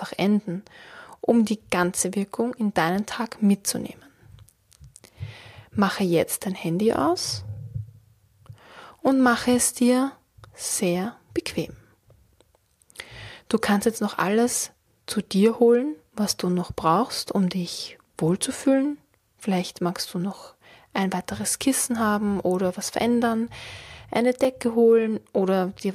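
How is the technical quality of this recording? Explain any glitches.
One glitch stands out: a block of digital silence at 24.44 s. For about 4 ms the samples drop to zeros, as when the output buffer isn't filled in time. The abrupt cut and return produce a tick, not a fading dropout or an audible gap.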